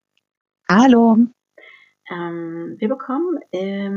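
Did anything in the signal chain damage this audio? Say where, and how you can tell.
Yes. The damage is gain pumping, and it runs through the whole clip. The level drops by around 5 dB under each loud sound. Loud and quiet passages sit closer together than they should, so the sound feels squashed. The likely cause is input gain set far too high at the microphone stage, with a fast limiter or compressor in the processing chain pulling the level down on every peak and releasing it between them.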